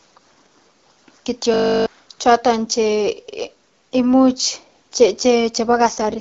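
A speech recording carried over AMR-WB (HD Voice) with two faults. From 1.54 to 1.86 s there is a system hang loop: the host or driver stalled while the sound hardware kept replaying its ring buffer, so one 20 ms slice of audio repeats exactly about 16 times. A slice that short is heard as a steady buzz at 50 Hz rather than a stutter, and roughly 300 ms of real audio is missing when the sound resumes. From 5.68 s to the end, at 6.20 s, there is an AMR rate drop. The bandwidth stays the same and there is no gap, but the speech turns rougher and more synthetic. This is the sound of the network pushing the codec onto a lower mode to free bits for error protection on a weak radio link, consistent with a step from 12.65 down to 6.6 kbit/s, where AMR-WB's pulse-excited model loses much of its detail.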